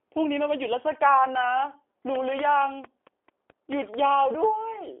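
From the start, the speech carries G.729 codec damage, plainly audible throughout. The voice is rebuilt from a vocal tract filter, a pitch predictor and a few pulses per short frame, so it comes out slightly rough and synthetic, which points to an 8 kbit/s G.729A stream. Nothing passes above 3.4 kHz. That hard ceiling together with the buzzy, pulse-built texture separates it from simple band-limiting, which dulls the sound without making it synthetic.

From 2.15 s to 3.95 s a train of clicks ticks over the sound, about ten of them at a steady 4.5 per second. They peak about 10 dB above the signal and keep the same shape and spacing, landing in pauses as well as under the speech. That even, repeated pulse sets it apart from the random crackle of a damaged recording. The likely source is interference from nearby equipment or a faulty connection or power supply.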